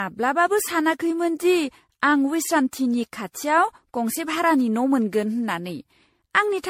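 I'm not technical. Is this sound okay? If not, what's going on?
No. Throughout, the speech sounds swirly, hollow and smeared, with blurred edges; this is likely generation loss, from being compressed as MP3 about ten times over.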